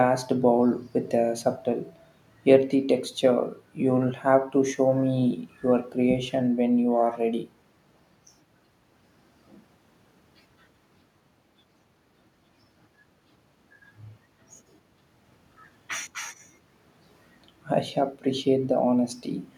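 A speech recording, and nothing in it is technically wrong.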